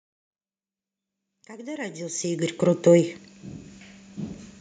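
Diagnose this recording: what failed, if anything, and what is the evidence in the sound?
Nothing in the recording points to a failure at any stage of the chain. The speech comes in on a smooth fade from the very beginning, reaching full level at about 2.77 s with no click or hard edge, just as an editor would shape it.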